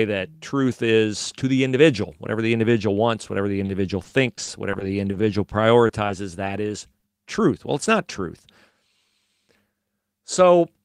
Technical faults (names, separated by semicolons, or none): repeated packet loss (robotic sound); short stall from a late packet